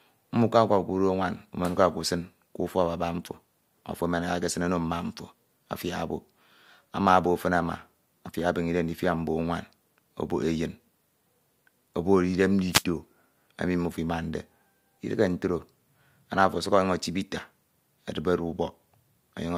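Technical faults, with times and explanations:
12.70–12.84 s: wireless microphone noise hit, a short burst of static where the analogue FM link fades and receiver noise briefly covers the speech.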